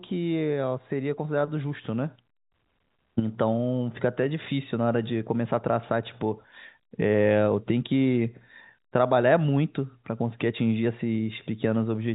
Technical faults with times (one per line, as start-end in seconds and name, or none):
none